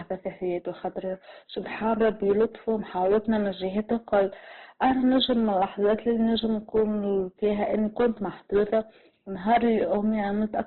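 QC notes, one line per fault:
Throughout, Opus compression: the speech sounds grainy, rough and dull, with nothing above 4.4 kHz. This is likely Opus in its music (CELT) mode at a narrowband setting, refilling starved bands with noise or folded copies, which fits a bitrate near 12 kbps.
1.88–3.37 s, 3.78–4.24 s, 4.83–6.83 s, 7.44–8.07 s, 8.55–8.79 s and 9.48–9.98 s, hard clipping: loud passages turn harsh and crackly as peaks overshoot the ceiling by about 4 to 10 dB, worst at 9.48 s. The flattened peaks add high harmonics heard as fuzz.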